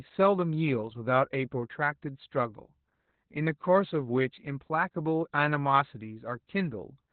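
Speech, with heavy Opus voice compression throughout. Nothing comes through above about 4.4 kHz, and the voice sounds hoarse and slightly robotic, which fits narrowband SILK at roughly 8 kbps. A plain low-pass filter would muffle the voice without adding that coarse, buzzy roughness.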